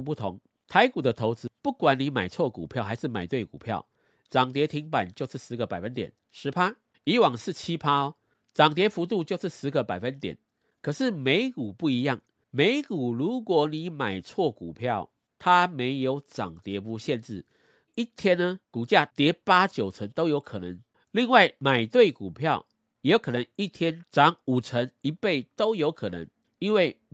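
No audible technical faults.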